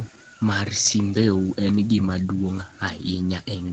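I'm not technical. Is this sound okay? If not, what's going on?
No, there are three kinds of problem in this speech clip, all tied to one side of the call using a loudspeaker.

The first is an echo leak, heard at 0.03 to 0.18 s, 0.84 to 0.93 s and 3.64 to 3.72 s. A faint second copy of the voice trails the original by about 0.2 s each time. The likely cause is that the echo canceller on the loudspeaker side didn't fully remove what its microphone picked up, so some of it was sent back. The steady, repeated delay is what sets it apart from ordinary room reverberation, which smears the sound instead of repeating it.

The second is background gated by the echo canceller, from 0.22 to 0.40 s. For about a fifth of a second the room's background sound drops away sharply, then comes back. The echo canceller turned the microphone down hard while the loudspeaker was playing and released it afterwards.

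The third is speech suppressed in double talk, spread between 0.69 and 3.48 s and adding up to about two seconds. The voice itself sinks, at its deepest almost to nothing, in stretches. The likely cause is that both people spoke at once, and the echo canceller, unable to tell the talker from the loudspeaker's echo, turned everything down.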